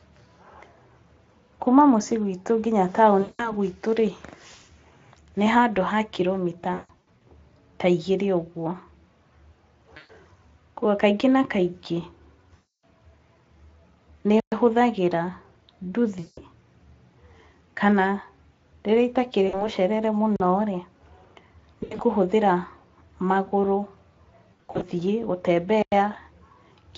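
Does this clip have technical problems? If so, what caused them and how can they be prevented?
Yes. VoIP packet loss concealed by the speech codec occurs at 3.21–3.52 s, 6.73–7.22 s, 9.97–10.11 s, 12.55–12.85 s, 16.19–16.40 s, 19.47–19.68 s, 21.83–22.02 s and 24.53–24.84 s. Packets never arrived, and the Speex decoder filled the holes by repeating its last pitch and spectral shape at falling gain. Each dropout becomes a buzzy tone or coloured noise that fades. The missing stretches run from 60 ms to 300 ms, in steps that fit 20 ms packets. At 6.73 s, 21.83 s and 24.53 s the losses come in scattered bursts, so the sound stutters in and out rather than fading once. Sending over a more stable connection with a jitter buffer and forward error correction would prevent most of these.

A block of digital silence appears at 14.40–14.52 s (120 ms), 20.36–20.40 s (40 ms) and 25.82–25.92 s (about 97 ms). 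The output buffer was most likely not filled in time, so zeros went out instead of audio. The sound drops to dead silence and returns without any fade, leaving a short hole. Giving the audio thread a larger buffer or higher priority would prevent these underruns.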